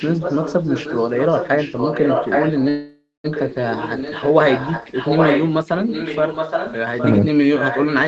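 From 0.0 to 7.27 s, and again from 7.58 s to the end, a second copy of the speech trails the original by about 0.82 s and sits only a little quieter, the likely result of an echo leak from a loudspeaker not fully cancelled on the far side. On a spectrogram the harmonic patterns of each phrase reappear, fainter and shifted right by that delay.

Between 2.69 and 3.26 s there is a call audio freeze, likely from packets arriving late and the jitter buffer running dry. About 0.55 s is filled with a fading buzz of the last sound, ending in roughly 0.19 s of silence, then speech resumes where it stopped, running about 0.55 s later than before, with nothing lost. The waveform shows a decaying smear, then a flat gap.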